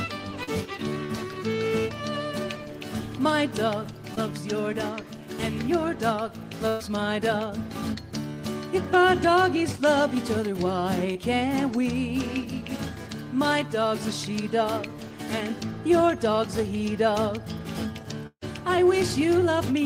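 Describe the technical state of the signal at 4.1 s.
A short concealed packet loss at 4.15–4.19 s: about 20 ms went missing and the decoder patched the gap by extending the preceding sound, heard as a brief smear or wobble and visible on a spectrogram as a blurred, sliver-thin patch.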